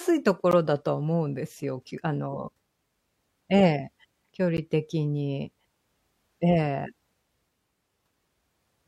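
A hard-edged dropout of about 15 ms at 0.51 s, then another of about 12 ms at 4.57 s, cuts into the speech. Each is a gap between stream segments, where mismatched time stamps at 4-second segment boundaries leave silence but lose no audio.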